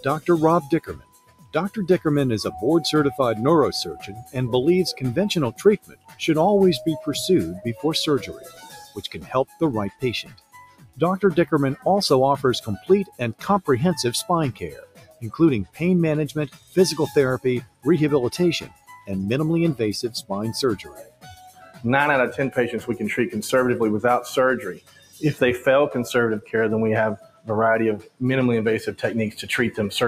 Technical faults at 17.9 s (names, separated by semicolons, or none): noise suppressor applied to music or sounds; sound cut by the noise suppressor